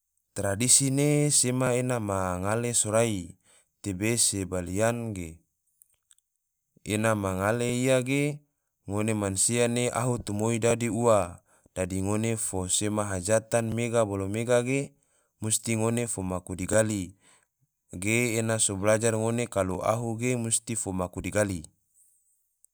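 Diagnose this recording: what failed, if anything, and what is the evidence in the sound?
Overlapping chunks at the buffer stage: clicks at 1.67, 4.68, 7.69, 10.71, 13.72, 16.73 and 19.75 s, 3 s apart, with each join replaying 13 ms.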